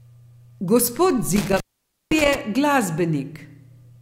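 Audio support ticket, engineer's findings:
Intermittent contact, 1.36–2.35 s: loose cable or plug connection breaking momentarily, line open about 0.51 s in total across that span. Speech drops out with crackle at each break and make; faint hiss remains while open. Check connectors and cable strain relief.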